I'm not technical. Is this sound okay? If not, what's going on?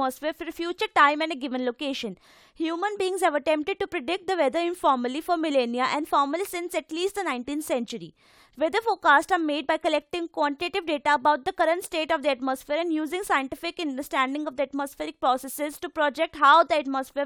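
Yes, no faults here.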